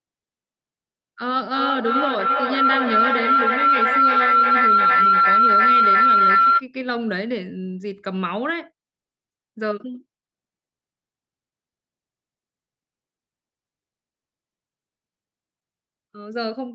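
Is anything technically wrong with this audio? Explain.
Yes, there is a feedback howl from 1.51 s to 6.66 s. Two devices in one room on the same call keep feeding the loudspeaker back into the microphone, each trip adding level, so a tone near 1.5 kHz swells to about 9 dB above the speech, pulsing roughly every 300 ms. A spectrogram shows a bright horizontal line at that frequency, and the waveform shows swelling rhythmic bulges. The sound tops out at 8 kHz throughout, which fits the call's codec.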